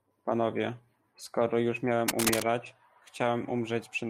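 From 2.08 to 2.43 s the speech is overlaid with cable scratch noise: a dense, uneven crackle and rustle, roughly as loud as the speech itself. The likely cause is a worn cable or connector being moved, so its contact resistance jumps around and injects irregular bursts into the signal. On a waveform this shows as a cluster of jagged spikes riding on the speech; a spectrogram shows ragged broadband vertical streaks across that third of a second.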